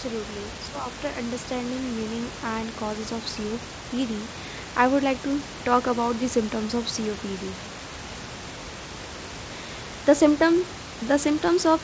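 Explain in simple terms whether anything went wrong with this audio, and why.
Nothing stood out on listening; the background noise of the room and the slightly muffled, phone-call quality from the call connection are normal parts of a recording like this.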